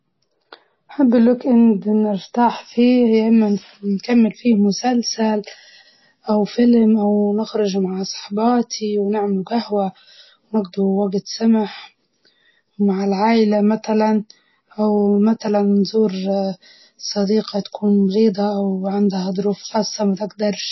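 From start to finish the speech is band-limited, with nothing above about 5.8 kHz, and has a watery, swirling texture, most likely MP3 compression at a very low bitrate.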